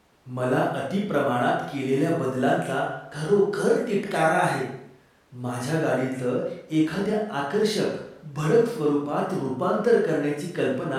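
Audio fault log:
No technical fault can be heard anywhere in this speech recording.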